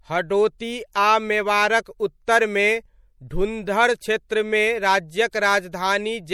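The whole clip carries audible MP3 compression, likely from an encoder starved of bits. Treble stops dead at 18.4 kHz, and the swirly, watery texture fits something like 64 kbps. Pre-echo turns up at 0.58 s, 4.29 s and 5.31 to 5.33 s: codec noise smeared backward ahead of sharp onsets, so each attack gets a short hiss just before it and sounds blunted.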